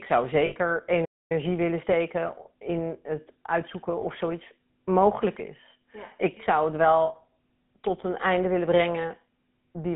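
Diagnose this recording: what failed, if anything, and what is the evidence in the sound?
The call path ran through the GSM full-rate codec, which rebuilds speech from a vocal-tract model excited by sparse pulses. The whole clip has a buzzy, gravelly grain, consistent with its 13 kbit/s coding, and the band runs only from about 150 Hz to 3.5 kHz.

On the network side, lost GSM frames were concealed by repeating the last good frame with decaying level. A short metallic ring replaces the speech at 0.46 to 0.55 s, at 4.00 to 4.03 s, and at 7.06 to 7.15 s, just after "zou het".

At the playback stage, output goes silent mid-flow from 1.05 to 1.32 s, a gap of about a quarter second. The likely cause is a playback stall, where the player's buffer ran dry or its thread was blocked before audio resumed.

The player then used time-compressed catch-up to drain its backlog, cutting and cross-fading small segments. 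From 1.32 to 3.84 s the speech runs about 1.1 times fast at unchanged pitch, sounding hurried.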